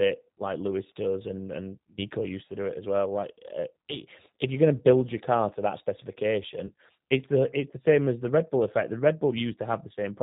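Across the whole clip the speech sounds band-limited and plainly synthetic, with a rough, processed edge and nothing above 4 kHz. This is the G.729 codec (the G.729A variant) at 8 kbit/s. It does not send the waveform itself. It sends a vocal tract filter, a pitch predictor and a sparse set of pulses for each 10 ms frame. The decoder rebuilds speech from that model, so the fine detail and top octave are gone.

From 6.67 to 6.71 s there is a brief smeared stretch that fades, and the speech stays weakened for a moment as "it's the it's the" begins. This is VoIP packet loss concealed by the speech codec. About 20 ms of audio went missing, which fits one lost packet. The decoder filled the gap by extending its last pitch and filter at falling gain, and later frames carry that error forward until the model settles.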